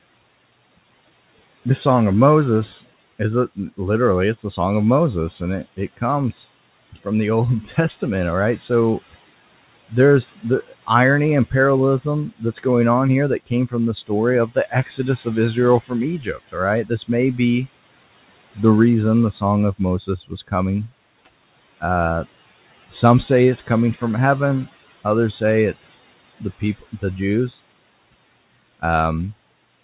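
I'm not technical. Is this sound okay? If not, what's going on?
No. The fault is speech cut by the noise suppressor. The call's noise filter, there to remove the room's background noise, mistook parts of the speech for noise and turned them down too. It happens in five stretches: 5.64 to 8.7 s, 9.9 to 17.39 s, 18.55 to 21.82 s, 22.9 to 24.02 s and 25.04 to 27.58 s. Within each, brief bits of speech sound swallowed or faint, about a second in total in the longest stretch and less in the others.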